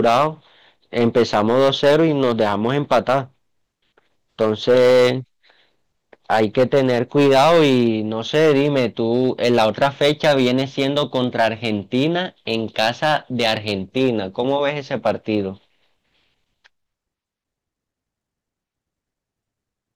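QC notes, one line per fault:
throughout, hard clipping: the speech hits a stage about 9 dB hotter than it can pass, so a few percent of samples get their peaks sliced flat. Those squared-off tops spray high harmonics, which is why louder syllables come with a gritty crackle.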